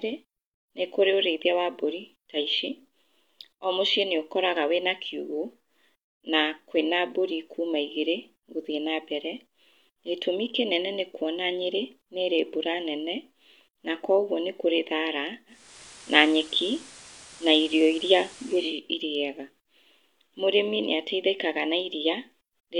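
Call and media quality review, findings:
Digital radio blending to analogue, 15.46–18.81 s after "na kũoguo nĩkũrĩ thara": 355 ms cross-fade to FM, about 3 dB level step. Hiss about 20 dB below signal rules out codec bandwidth drop.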